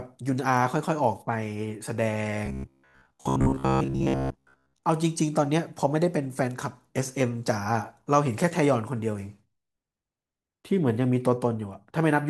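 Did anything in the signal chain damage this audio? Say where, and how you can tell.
Yes. From 2.46 to 4.86 s the speech turns into a rigid, metallic buzz. It still tracks the words roughly, but a buzz at a fixed rate of about 67 Hz runs through it. That points to the driver or buffer stage. New audio was likely arriving too slowly, so the last short chunk was replayed to fill the gap. Most of the real audio in that stretch was skipped. This is robotic sound from repeated short buffers. The 67 Hz buzz fits a repeated chunk of about 15 ms.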